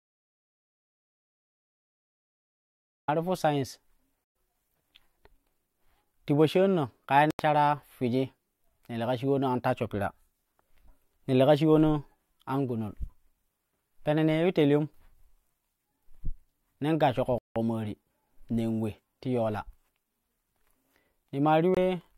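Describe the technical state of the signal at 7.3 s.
At 7.31 s the speech drops to dead silence for about 86 ms, resuming at 7.39 s. The gap is a hard cut with no fade, consistent with a Bluetooth stall. The likely cause is radio interference delaying packets on the wireless link, so the receiving headphones ran out of buffered audio and had nothing to play until retransmitted data arrived. Once the buffer refilled, playback continued.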